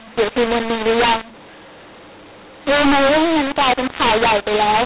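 Throughout, the speech sounds harsh and distorted, with noise filling the pauses. This is a mu-law and A-law mix-up: A-law telephone audio decoded as mu-law.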